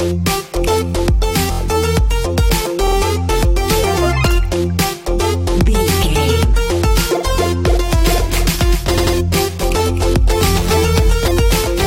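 At 1.51 s and 2.86 s, repeated frames make the sound stutter. A 23.2 ms block plays three extra times, then a 46.4 ms block plays twice more, adding about 70 and 93 ms. On a waveform these look like identical copied segments, and on a spectrogram like repeating vertical slices.

From 8.04 s to the end, a doubled audio track is present. A full-band copy about 10 dB quieter trails by roughly 300 ms, likely from a slower second capture path. It begins abruptly, with no decay or room colour, and shows on a spectrogram as a faint, unsmeared replica shifted to the right.

Within that section, at 8.97 s, repeated frames return: a 92.9 ms block plays twice more, adding 185.8 ms.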